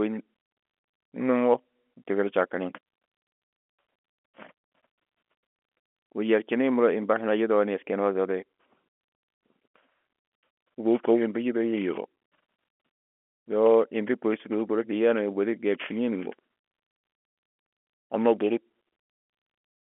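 No technical faults are audible.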